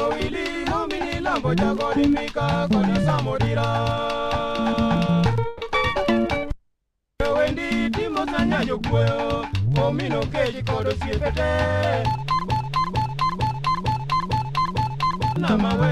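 At 5.47 s there's a brief call audio freeze: the sound smears into a short fading buzz for 0.14 s, then resumes intact, likely packets stalled and the jitter buffer ran dry. From 12.50 to 15.36 s a broken-record loop repeats a 0.45 s fragment six times back to back, likely a stalled stream resending its last chunk while the real audio is lost.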